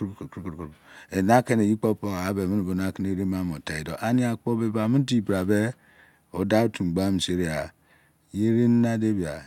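No technical faults can be heard anywhere in the speech. Nothing in the recording needs an account of something going wrong.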